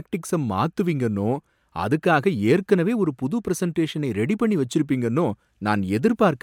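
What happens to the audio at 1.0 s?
Nothing goes wrong at 1.0 s; the speech there plays through intact, with no dropout, click or distortion.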